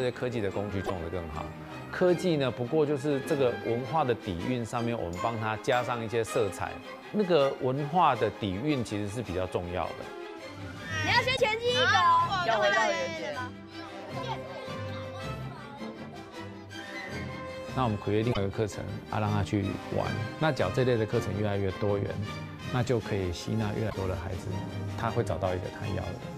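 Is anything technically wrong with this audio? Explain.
Yes. Four brief glitches cut through the audio, each lasting about 70 to 85 ms: at 0.82 to 0.91 s, 11.33 to 11.40 s, 18.30 to 18.37 s, and 23.86 to 23.95 s. These are damaged data in a compressed stream. At each spot the compressed bytes are corrupted, so the decoder misreads the affected frames, loses its place, and scans ahead for the next valid frame header before resuming normal playback.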